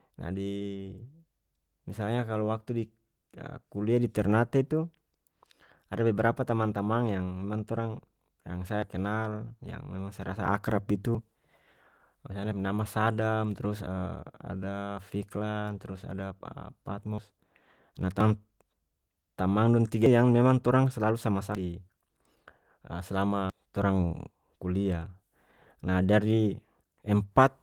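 The speech jumps ahead at 8.82, 11.15, 17.18 and 18.20 s, losing about a tenth of a second each time. Bigger skips follow at 20.06 s after "tamang dong tiga", 21.55 s after "torang selalu", and 23.50 s, roughly 0.2 to 0.3 s each. It's likely a dropped buffer (overrun), with chunks overwritten before being read and the remaining audio butted together.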